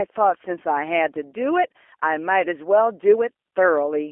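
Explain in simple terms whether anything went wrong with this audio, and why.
Yes, the G.729 codec, a low-rate phone-call codec, shaped the whole clip. It rebuilds speech from a simple model of the vocal tract plus a few pulses, so the voice sounds rough and slightly synthetic. The line carries only about 300 Hz to 3.4 kHz, which makes it thin and muffled.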